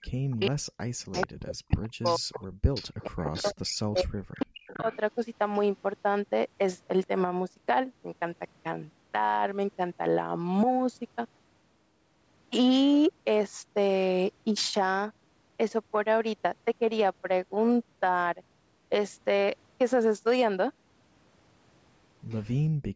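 From the start to 2.43 s, and again from 3.06 to 4.86 s, the speech is suppressed in double talk. Both ends were likely talking at once, and the echo canceller could not tell the local talker from the loudspeaker echo, so it turned everything down. The voice dips and breaks up in pieces, sinking by roughly 40 dB at its deepest, for about a second and a half in the first stretch and about a second in the second.

Echo leak overlaps these stretches, with scraps at 0.4 to 0.48 s and 4.65 to 4.99 s and a longer run from 1.12 to 4.04 s. One side's canceller likely failed to remove all of what its microphone caught from its loudspeaker, so a copy of the speech came back 436 ms late. In the long run that copy sits only around 10 dB under the speech. The two short scraps are fainter.

Brief, very faint echo traces return at 5.55 to 5.6 s and 22.3 to 22.47 s, roughly 30 dB down.

From 22.7 to 22.93 s the background is gated by the echo canceller, which clamped the microphone hard while the loudspeaker played. 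The room sound drops by about 31 dB for around 150 ms before coming back. Like the rest of the call audio, it carries nothing above 8 kHz.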